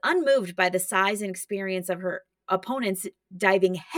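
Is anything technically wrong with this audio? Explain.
Yes. Channel delay (comb filtering) runs through the whole speech clip. One channel arrives roughly 5 ms after the other, and when the two are summed to mono, components common to both cancel wherever they land half a cycle apart. That puts the first notch near 100 Hz, with further notches evenly spaced above it. The result sounds hollow and phasey. On a spectrogram this shows as fixed, evenly spaced dark horizontal bands that stay put across the entire clip.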